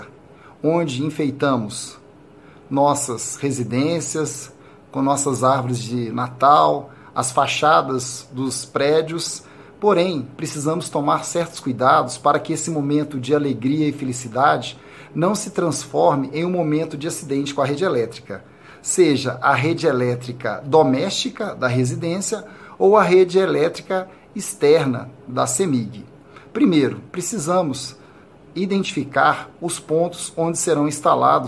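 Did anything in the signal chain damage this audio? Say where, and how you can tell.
No, nothing along the chain seems to have left a mark here, so there's no stage to point at and no damage to explain.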